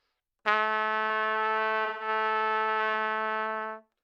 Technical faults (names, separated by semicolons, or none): AAC frame loss with concealment